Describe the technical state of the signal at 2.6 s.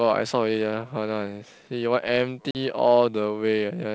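Speech resumes slightly distorted after a silent gap at 2.51–2.57 s: packet loss on an ADPCM call, desyncing the decoder's predictor and step size.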